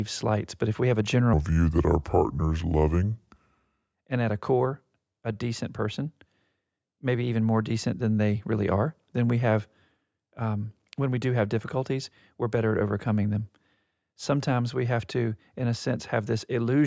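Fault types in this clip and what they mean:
Wrong sample rate: from 1.33 to 3.94 s the audio plays back without rate conversion at 0.73 times normal speed, so the speech drags and drops about 5.5 semitones, sounding low and slow. The ratio fits material recorded at 22 kHz being played at 16 kHz.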